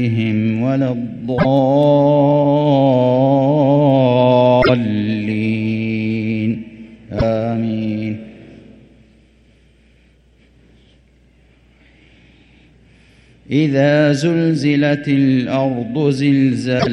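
At 1.37, 4.61, 7.17 and 16.79 s the sound skips ahead and a short glitch follows. Each glitch lasts 50 to 85 ms, roughly two or three frames of 26.1 ms. The likely cause is a broken MP3 bit reservoir. Frames were lost, so the next frames reached back for borrowed data and decoded another frame's bytes instead. The garbage clears once frames stop borrowing across the gap.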